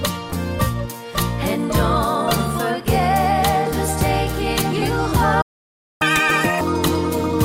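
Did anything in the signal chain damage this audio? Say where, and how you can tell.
Yes. At 5.41 s the sound cuts out mid-flow and the output goes completely silent for about 0.59 s, until 6.02 s, then resumes where it left off. This is a playback stall at the player stage. The clean drop to silence and the resumption point suggest the player's output was starved rather than the signal being damaged upstream. The likely cause is a buffer underrun or a blocked playback thread that briefly stopped feeding the output device.

From 6.02 s to 6.61 s the audio plays at twice normal speed, and its pitch jumps to roughly ten semitones higher, giving a rushed, chipmunk-like quality before it snaps back to normal. This is catch-up at higher speed, also at the playback stage. Having fallen behind during the stall, the player resampled its backlog at 2x to recover the lost time. Because resampling changes speed and pitch together, the pitch rises with it.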